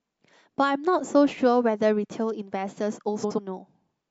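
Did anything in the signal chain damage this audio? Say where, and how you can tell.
Yes. From 3.23 to 3.39 s the speech turns into a brief garbled flutter. This is frames out of order in the network stage: two adjacent runs of about 70 ms each, likely three codec frames apiece, were decoded swapped, so nothing is lost but the order is wrong.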